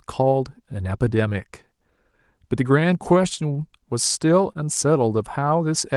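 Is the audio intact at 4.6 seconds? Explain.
No. Clock drift between sender and receiver runs through the whole clip. The sender's clock is a few percent slow, so the receiver's jitter buffer keeps draining.

Repeated timing corrections cover 0.06 to 5.96 s. The receiver keeps stretching short pieces, so the sound plays at 98% speed. About 150 ms is added in total, heard, if at all, as slight hiccups or an uneven tempo.

Just before 4.6 s, there is a short stall from a late packet at 4.52 to 4.57 s. The buffer ran empty, and the receiver held the last sound for 29 ms. Nothing is lost, but the sound lingers with a slight buzz or dip.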